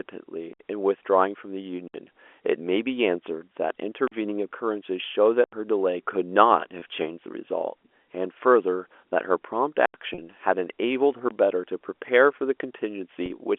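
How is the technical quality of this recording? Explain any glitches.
The recording is a telephone-band speech call, and it has two kinds of glitch: repeated dropouts to silence and a few concealed packet losses. The G.711 line coding itself adds no more than a faint noise floor.

Blocks of digital silence occur at 0.53–0.60 s, 1.88–1.94 s, 4.08–4.12 s, 5.44–5.53 s, 9.86–9.94 s and 11.29–11.31 s. They last from about 21 to 85 ms. The output buffer was probably not filled in time, so zeros were sent. Four of the sizes fit buffers of 1024, 2048 and 4096 samples. Each cut is abrupt and leaves a short hole.

Packet loss with pitch repetition appears at 6.80 s, 10.14–10.18 s and 13.26–13.30 s. The first gap lasts 20 ms, which points to one lost packet. The later two last 40 ms each. The receiver filled each gap by repeating the last pitch period and fading it. These gaps are short, so the sound briefly holds on a slightly buzzy tone instead of dropping out.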